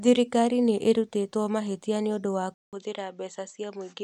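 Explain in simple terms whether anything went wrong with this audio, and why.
At 2.54 seconds the recording likely switched its input to a poorer device, such as a different microphone. After a brief gap of about 0.19 seconds, the speech continues duller and slightly quieter, losing everything above 8 kHz and gaining faint new background noise, until the end.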